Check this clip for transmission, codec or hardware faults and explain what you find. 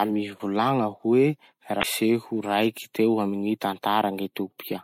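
One fault is present. From 1.79 to 1.85 s the speech breaks up for about 56 ms. This is damaged data in a compressed stream: some bytes in that stretch of the encoded file were corrupted, so the decoder misread those frames, lost sync, and resumed only at the next valid frame header.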